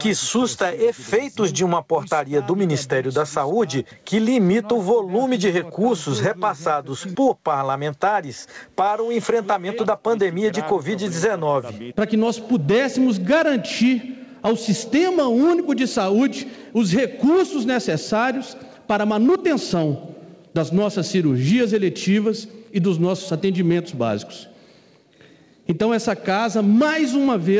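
Gain pumping runs through the whole clip: the gain swings by about 10 dB, dropping the moment a loud sound arrives, so loud and quiet passages sit unnaturally close in level and the audio sounds squashed. The likely cause is input gain set far too high for the microphone, with a fast limiter or compressor clamping down on each peak and releasing in the pauses. Nothing is heard above 8 kHz, which fits a G.722 call codec.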